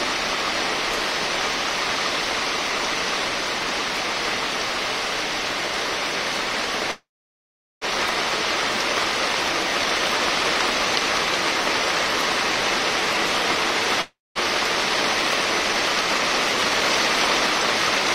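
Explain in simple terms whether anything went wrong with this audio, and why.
Two separate problems can be heard.

At 6.91 s the sound stops and holds for about 0.9 s, until 7.84 s. This is a call audio freeze. The last sound is stretched into a brief fading buzz, then goes quiet for roughly 0.78 s. The likely cause is data being held up in transit so the playback buffer ran dry. When it resumed, nothing had been lost, but everything after it plays about 0.9 s later than before.

At 14.01 s there is a long network dropout lasting until 14.38 s. Again the last sound fades into a short buzz, followed by about 0.21 s of silence. This time, though, roughly 0.36 s of audio is gone for good, so the sound picks up further along instead of where it left off. The likely cause is that the data for that stretch never arrived. The overall timing barely shifts here.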